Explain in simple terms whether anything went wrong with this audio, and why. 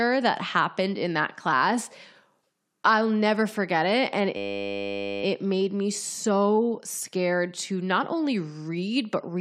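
Something did go wrong between 4.37 and 5.23 s. The speech stops and is replaced by a steady buzz. This is a system hang loop: the computer or its audio driver briefly froze, while the sound hardware kept replaying the last tiny slice it held, 10 ms long, over and over. Repeating that slice 100 times a second produces a 100 Hz hum. When the system recovers, the speech picks up where it left off, with essentially nothing skipped.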